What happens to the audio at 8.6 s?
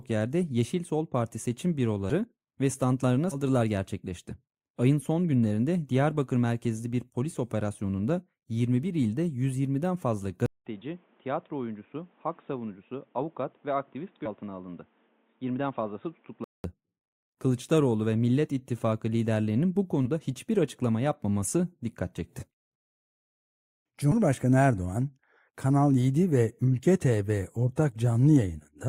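At 8.6 s the speech runs on intact, with no dropout, click, distortion or other fault.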